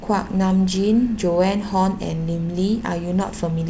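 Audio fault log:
No fault is present in this audio.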